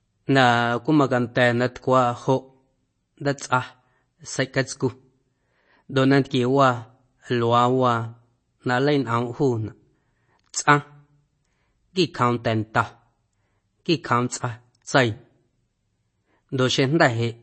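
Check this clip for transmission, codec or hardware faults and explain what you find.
One fault runs throughout the clip: MP3 compression, plainly audible. Nothing sounds above 8.3 kHz. The likely cause is an encoder short of bits, which fits 32 kbps. It cut the treble and dropped weak lines frame by frame. The speech sounds watery, with swirly s sounds.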